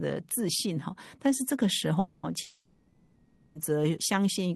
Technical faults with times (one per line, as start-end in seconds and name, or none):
1.99-3.58 long network dropout